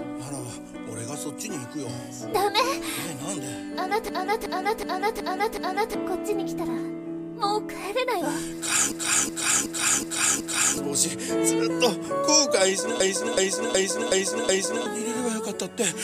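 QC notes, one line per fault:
4.09–5.94 s, 8.92–10.77 s and 13.00–14.86 s, system hang loop: each time the system stalls and the hardware replays one 0.37 s chunk five times, a stutter at about 2.7 Hz that fits a 16384-sample buffer. About two seconds of audio goes missing at each.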